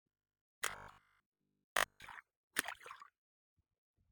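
From 0.02 to 2.12 s the sound turns into robotic sound from repeated short buffers: a rigid, metallic buzz fixed at 50 Hz that only loosely tracks the underlying material. The likely cause is audio arriving too seldom, so that for most of this stretch a 20 ms slice is looped in place of skipped audio. On a waveform this appears as identical 20 ms cycles. A spectrogram shows stiff harmonics stacked at 50 Hz spacing.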